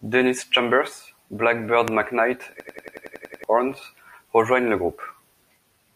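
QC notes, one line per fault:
1.88–1.90 s, loud pop: a single sharp pop sits on top of the speech, roughly 15 dB above it, and the speech continues underneath. A brief voltage pulse was likely added to the signal by a switch, static or a driver glitch.
2.60–3.44 s, system hang loop: one 92.88 ms slice of audio repeats exactly nine times at 10.8 Hz, giving a machine-gun stutter. The system froze while the hardware kept replaying its buffer, which fits 4096 samples. Around 0.7 s of audio is lost.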